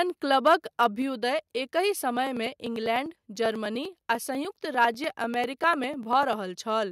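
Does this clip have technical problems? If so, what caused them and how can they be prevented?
Yes. At 0.46 to 0.55 s and again at 4.81 to 4.85 s, the loudest peaks sound harsh and crackly. The tops of the waveform are flattened, by about 3 dB in the first burst and about 2 dB in the second, and a small share of samples was clipped at the converter's limit. This is likely microphone overload, with input gain set so high that the converter ran out of headroom. To prevent it, lower the microphone input gain until the loudest peaks stay well below full scale.

At 1.02 s, the whole signal, background included, drops by about 3 dB in a single step. It comes just after the first distorted peak. This is likely the microphone volume stepped down by the call software, which reacted to the clipping by cutting the device's input level at once. To prevent it, set a safe input level yourself and turn off automatic microphone gain adjustment in the call software.

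From 2.17 s to 6.33 s, there are regular ticks every 0.099 s, around forty of them. Each one skips about a millisecond of audio, with no silence filling the gap, so the waveform jumps and clicks. The clicks are heard only while there is sound. The even spacing points to periodic USB or driver dropouts, where something stalls the audio path on a fixed timer. To prevent them, find and stop the periodic background task, update the audio driver, or move the device to another USB port.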